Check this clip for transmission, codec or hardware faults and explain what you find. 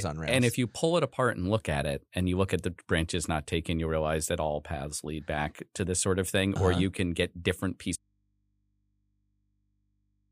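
One fault is present. An audio dropout to a faint residue starts at 7.96 s, right after "you can get different", and lasts to the end. The speech cuts abruptly to mains hum roughly 45 dB below, likely from a live input after a broken connection. A pause or fade would not leave hum.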